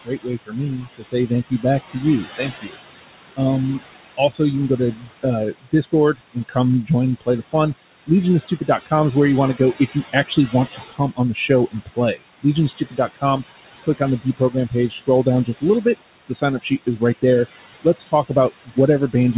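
From the first moment to the end there are noise suppressor artifacts. The room noise sits about 11 dB under the speech, and the suppressor pulls it down by about 17 dB, deciding frame by frame which bands count as noise. So the background dips in the gaps and swells back under the talking. Everything stops at 4 kHz, which points to a narrowband G.711 call path.

There's also speech cut by the noise suppressor, where it mistakes parts of the talking for background and turns them down with it. It happens from 0.05 to 2.77 s, 3.79 to 5.25 s, 5.62 to 6.9 s, 7.21 to 7.54 s, 8.41 to 8.92 s just before "is where you want", 9.91 to 13.24 s right after "want to go if", 13.83 to 17.24 s, and 17.82 s to the end. The drops reach about 17 to 22 dB, in short bites adding up to roughly a second in the longer stretches and a fraction of one in the shorter ones. Consonants and word endings come out swallowed and faint.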